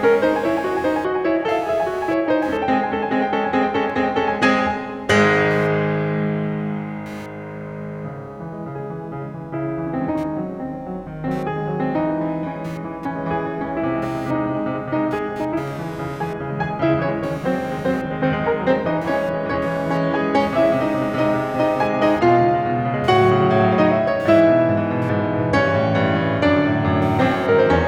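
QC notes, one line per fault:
Throughout: computer activity noise, a buzzing, chirping pulse repeating at around 200 times a second and sitting roughly 25 dB below the music. It follows the computer's workload rather than the music, because processor or graphics load changes disturb the audio circuit's shared ground.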